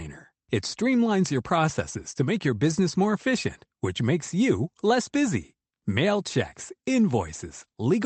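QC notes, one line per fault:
Nothing to flag here, just speech carried over a normal call path, with the top end stopping around 8 kHz, which fits an Opus call link.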